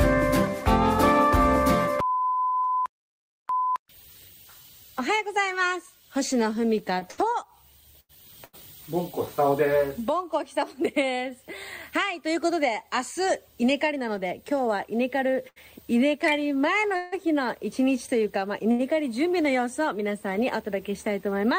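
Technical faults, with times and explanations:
6.99 to 8.55 s and 16.96 to 18.81 s, repeated stalls (stutter). Packets arrived late, so the jitter buffer kept running dry. The receiver held the last sound through each wait, five gaps then three, longest 89 ms and 159 ms. Nothing is lost. The audio drags and stutters.
12.27 to 14.99 s, jitter buffer speed-up. Too much audio had piled up in the buffer. The receiver cut short pitch-period pieces over and over, dropping roughly a tenth of a second. Playback runs about 4 percent fast at unchanged pitch.
15.48 s to 15.58 s, short stall from a late packet. One packet was missing when due. The receiver stretched the last sound for 76 ms, then resumed where it left off. Nothing is missing. One sound is held too long, with a faint buzz or dip.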